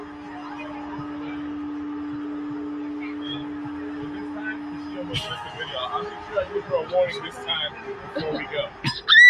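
From start to finish, a noise suppressor built for speech is working on material it was not designed for. It treats sustained tones, room ambience and reverb as unwanted noise. So it pulls them down. Attacks pass through mostly intact. Held sounds and decaying tails then sink. The level swings by about 10 dB as the processor clamps and releases. The result pumps and flutters. Sustained passages sound thin and hollowed out.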